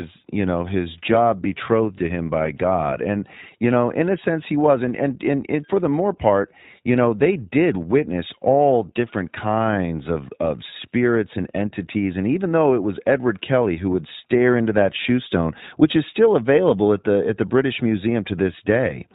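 Throughout, iLBC codec damage is plain: nothing above 4 kHz, plus a rough, synthetic edge that band-limiting would not add, which fits 20 ms frames.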